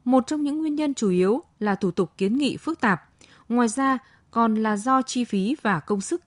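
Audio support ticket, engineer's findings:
No faults found on listening.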